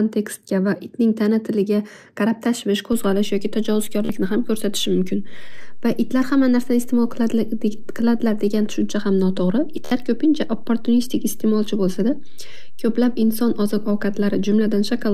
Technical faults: Bluetooth stutter; DC step

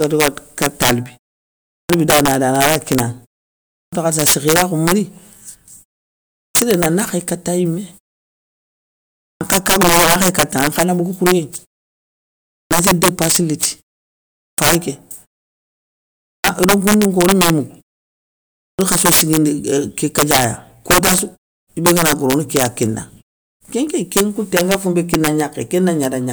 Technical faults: integer overflow; clipped start after a pause

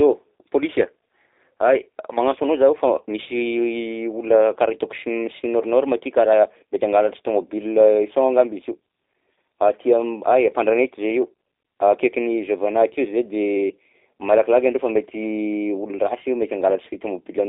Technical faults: G.729 codec

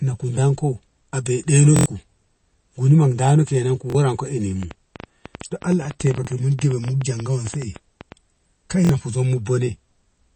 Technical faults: MP3 compression; repeated buffer; train of clicks

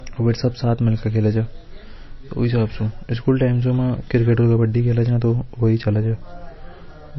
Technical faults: low-bitrate audio saved at a high bitrate

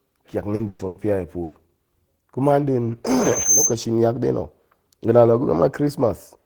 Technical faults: short concealed packet loss; burst of packet loss; loudspeaker feedback squeal

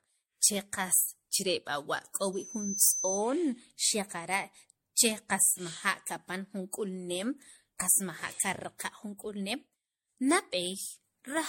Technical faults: generation loss; loudspeaker feedback squeal

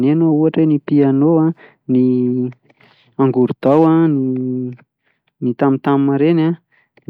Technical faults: hard clipping

